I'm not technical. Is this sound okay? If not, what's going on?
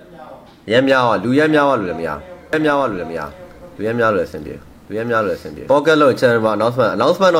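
No. A doubled audio track runs from 2.53 to 5.69 s: a second copy of the same sound plays about a second behind, just as loud, starting and stopping abruptly. It's likely caused by the audio being captured twice through a slower path.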